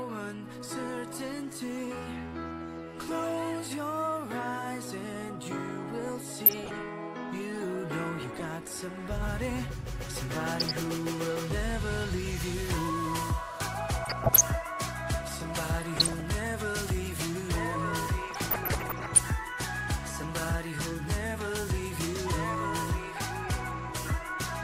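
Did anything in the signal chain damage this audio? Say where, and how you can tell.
Yes, DAB burbling at the codec stage: burbling bursts at 6.42–6.77, 8.22–8.45, 10.56–10.85, 14.03–14.41, 15.82–16.23 and 18.31–19.20 s, where reception bit errors corrupt MP2 sub-band levels frame by frame. The damage comes in bursts, unlike the steady swirl of low-bitrate coding.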